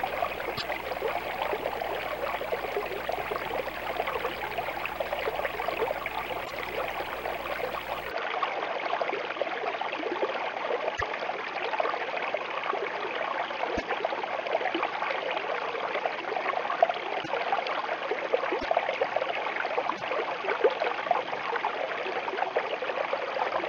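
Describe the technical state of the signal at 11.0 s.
A screen or video cable is coupling video or display buzz into the audio: a 59.94 Hz field-rate buzz with hash, about 20 dB below the signal, plus a thin 15.7 kHz line-rate whine.

From 8.11 s onward the input was likely switched to a poorer device. Nothing passes above 6.6 kHz, so the sound is dull, with a new noise floor roughly 45 dB down.

Between 10.96 and 11.02 s, cut frames likely left a broken MP3 bit reservoir. The following frames, consistent with 24 ms MP3 frames, decode borrowed bytes wrongly, so the sound jumps ahead through a brief chirp or noise burst.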